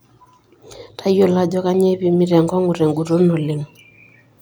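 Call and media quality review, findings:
Nothing stood out on listening to this speech recording.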